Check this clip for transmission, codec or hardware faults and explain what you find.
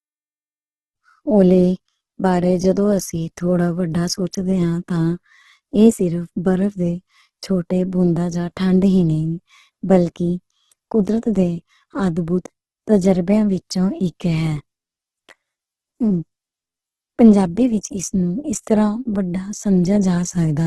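One codec fault affects the whole clip. Throughout, likely Opus compression starved at a rate fitting about 12 kbps fills bands with noise, leaving the speech heavily grainy and rough, with nothing above 12.1 kHz.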